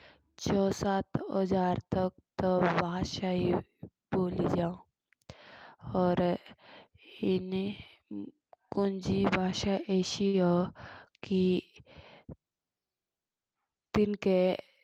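A short stall from a late packet occurs between 10.27 and 10.49 s. A packet failed to arrive on time, the jitter buffer ran dry, and the receiver filled about 61 ms by stretching the sound it had just played. When the packet turned up, playback resumed where it left off, so no speech is lost. What you hear is a sound held slightly too long, with a faint buzzy or dipping quality, and everything after it runs about 61 ms later.

A jitter buffer speed-up runs from 13.61 to 14.14 s. The buffer was holding more speech than its target, so the receiver trimmed away small slices one or a few pitch periods long, repeatedly, removing around 70 ms in total. Playback speeds up to about 111% while the pitch stays the same. The speech sounds briefly hurried, and the overall delay shrinks.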